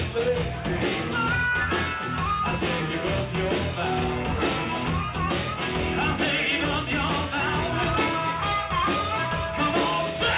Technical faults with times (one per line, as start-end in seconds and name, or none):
none